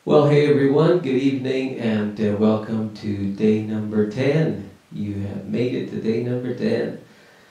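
Speech recording with no technical faults found anywhere in the clip.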